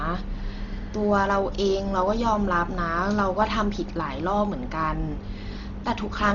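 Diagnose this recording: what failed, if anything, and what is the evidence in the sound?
The speech sounds dull and muffled throughout, with nothing above 7 kHz and a rough, fluttering noise around voiced tones, pointing to heavy Dolby Digital compression at the codec stage, likely at around 32 kbps. The encoder narrowed the band, and the decoder filled unfunded frequency lines with dither noise.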